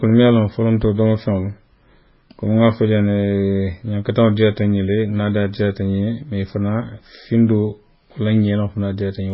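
From start to finish the speech has nothing above 5.6 kHz, and two textures of artefact sit on top of each other: a smeared, swirly low-rate character and a second, finer layer of coding grain. That combination likely comes from transcoding between lossy codecs, with a heavily starved first encode, consistent with MP3 near 16 kbit/s, re-encoded at a far higher rate, pointing to WMA around 96 kbit/s. A single low-bitrate encode would give one consistent artefact; here the generous second pass cannot restore the band or clean the earlier damage.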